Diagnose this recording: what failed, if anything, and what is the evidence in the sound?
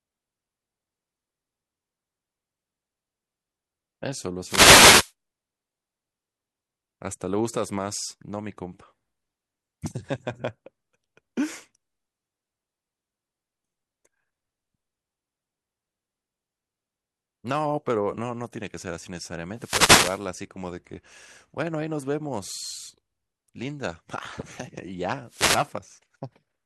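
Brief static swishes break into the speech at 4.42–5.13, 19.55–20.25 and 25.26–25.71 s: wireless microphone noise hits, as the analogue FM radio link fades and receiver noise surges.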